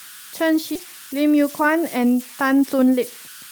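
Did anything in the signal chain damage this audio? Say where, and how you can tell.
Yes. At the converter stage, an undithered delta-sigma modulator produces converter idle tones throughout: tones near 1.5 kHz, about 20 dB below the speech, grainy in quieter passages.

On the network side, a skip ahead at 0.75 s dropped roughly 0.4 s of audio with no fill, so playback jumps straight forward and the two edges are spliced together.

In the jitter buffer, a speed-up from 0.85 to 2.04 s trimmed pitch periods repeatedly, about 0.1 s in total, so the speech runs 8% fast at unchanged pitch and sounds hurried.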